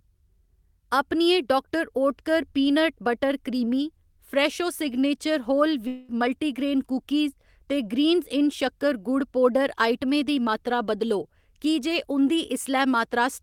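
At 5.87 s, after "क्रीमी फ्रैशो सिग्नेचर होल", the speech gives way to a fading buzz until 6.11 s, and 220 ms never returns, likely a long network dropout. A spectrogram shows smeared, decaying harmonics, and the waveform shrinks without reaching silence.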